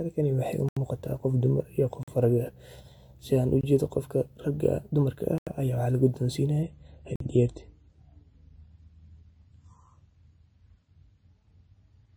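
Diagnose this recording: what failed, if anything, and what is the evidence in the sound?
The failure is at the driver or buffer stage: five blocks of digital silence cut into the speech at 0.69 to 0.77 s, 2.03 to 2.08 s, 3.61 to 3.63 s, 5.38 to 5.47 s and 7.16 to 7.20 s. Each is a hard cut to silence and back. The holes run about 23 to 87 ms. The 46 ms and 23 ms gaps fit whole 2048- and 1024-sample buffers left unfilled when the output ran short of data.

From 6.63 s to the end, the adaptive stream switches to a lower bitrate. This is a network-side failure. The switch is abrupt, with no gap. The treble collapses, with nothing above 9.3 kHz, and MP3 coding artefacts become audible across the rest of the speech. The change in character points to the player falling from about 128 kbit/s to a 24 kbit/s MP3 rendition after the connection slowed.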